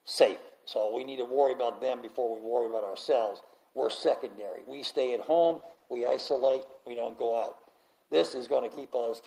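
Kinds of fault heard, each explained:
Call bitrate drop: from about 5.43 s to the end, the encoder has been starved of bits, and the sound turns coarse and watery while the top end thins and dulls, which fits a fall from around 40 kbps to roughly 13 kbps. It is worst for about 1.1 s. Unlike packet loss, nothing drops out or stutters. The audio stays continuous but smeared, and unlike a fixed filter, the roughness tracks the changing bitrate.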